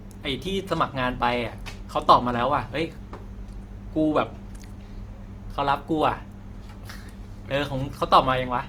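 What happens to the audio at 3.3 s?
Plainly audible Opus compression runs through the whole clip, 3.3 s included, likely from a CELT-mode encode at a rate that fits 24 kbps. Starved bands are filled by folding or noise, so the speech sounds rough and grainy, though still fullband to 20.2 kHz.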